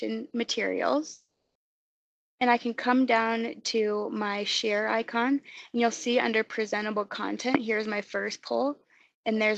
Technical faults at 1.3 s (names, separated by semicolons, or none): long network dropout